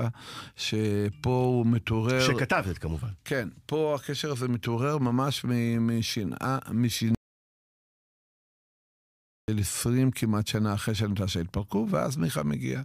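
At 7.15 s the speech cuts off mid-flow and the clip falls into an audio dropout to silence lasting 2.33 s, until the sound resumes abruptly at 9.48 s. The gap is silent, with no room tone, hiss or breath, and that is what separates it from a natural pause or a noise gate closing. The input was likely lost at the source while the recorder kept writing empty samples, so whatever was said in that stretch is gone.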